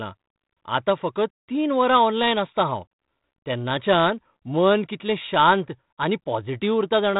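The speech comes through a telephone-band path that stops at about 3.8 kHz, consistent with G.726 ADPCM at 32 kbit/s, and shows only the light coding texture expected from it, with no technical faults to report.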